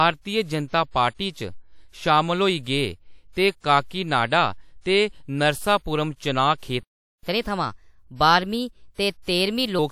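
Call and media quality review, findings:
Playback stall, 6.83–7.23 s: speech drops out mid-flow into about 0.4 s of silence, then resumes. The likely cause is a buffer underrun in the player or a blocked audio thread, with output held silent until data or scheduling recovered.

Catch-up at higher speed, 7.23–9.79 s: speech plays 1.15x fast, pitch raised about two semitones. The player is resampling its post-stall backlog to win back lost time, so speed and pitch rise together, then drop back to normal at 9.79 s.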